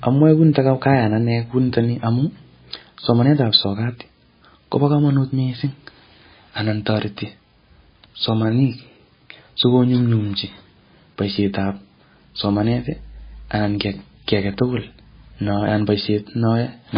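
From start to finish the speech sounds dull and watery, with nothing audible above 5 kHz, so s sounds lose their edge and turn swishy, while a swirling, metallic chirp flickers through the remaining upper range and consonant onsets smear. The likely cause is heavy MP3 compression at a very low bitrate, one that fits roughly 18 kbps: the encoder cuts the treble at a fixed point and drops weak frequency lines that blink on and off between frames.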